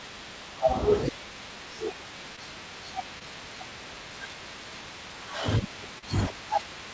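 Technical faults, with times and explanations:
2.36–2.39 s, 3.19–3.22 s and 5.98–6.04 s: short concealed packet loss. About 20, 20 and 40 ms of audio arrived too late, so the receiver extended the preceding sound and then crossfaded back, giving brief smears.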